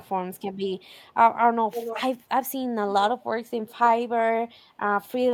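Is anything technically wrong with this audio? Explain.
Yes. From 1.72 to 2.02 s, and faintly from 3.66 to 3.74 s, a delayed copy of the speech trails it by 284 ms, the first fairly loud and the second barely audible. This echo leak is likely a loudspeaker's pickup slipping past the far end's echo canceller.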